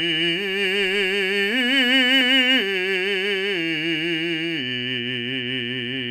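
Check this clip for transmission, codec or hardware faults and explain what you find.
Nothing in this music clip points to a fault anywhere along its path. The music carries on without any break or damage that would need explaining.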